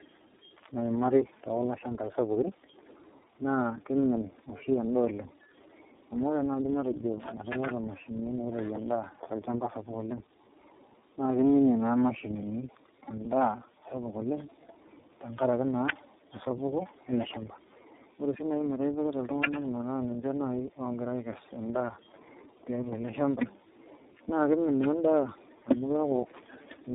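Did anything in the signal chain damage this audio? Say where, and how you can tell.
Yes. The damage is at the codec stage and runs through the whole clip: this is tandem speech coding. The speech sounds rough, muffled and warbly in a way one low-rate coder would not produce, which fits about three speech codecs in series. Each one re-encodes the previous one's errors. On a spectrogram nothing rises above about 3.7 kHz, harmonics look smeared and patchy, and formant bands wobble from frame to frame.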